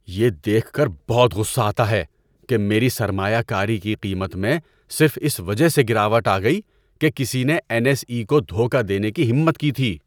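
No technical faults are audible.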